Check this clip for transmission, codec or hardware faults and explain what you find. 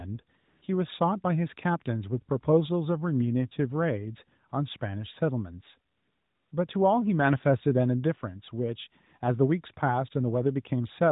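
Three stretches of AMR comfort noise turn up in the speech, on a narrowband mobile link whose light coding sounds like AMR-NB at its top 12.2 kbps mode.

The gaps sit at 0.38 to 0.62 s (about 240 ms), a brief 4.50 to 4.52 s (20 ms) and 5.92 to 6.52 s (600 ms). The sender decided nobody was talking and stopped sending speech frames, so the far end painted in smooth synthetic hiss from a rough level and spectrum sketch. You hear the real background swap for that even noise and switch back.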